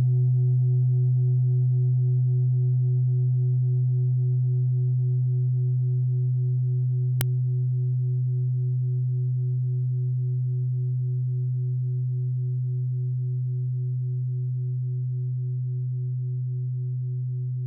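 An uninitialised buffer fault occurs at 7.21 s: a block was played out before any audio had been written into it, so leftover memory was read as samples. It is heard as a sudden, loud crack lasting about 1.45 ms, which fits a 64-sample block.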